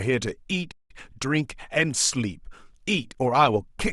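A short speech recording with a playback stall: at 0.71 s the sound stops mid-flow and stays silent for about 180 ms, resuming at 0.91 s. The likely cause is the player running out of buffered data or its thread being blocked.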